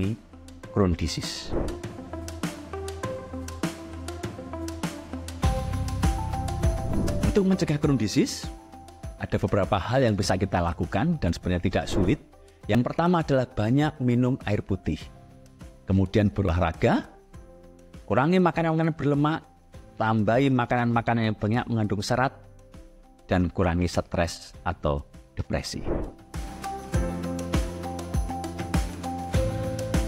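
At 12.75 s and 16.49 s the audio jumps ahead, likely a dropped buffer (overrun), losing roughly 20 ms and 70 ms respectively.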